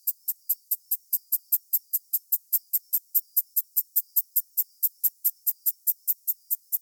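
No technical faults can be heard anywhere in this audio. There is nothing to place on a timeline.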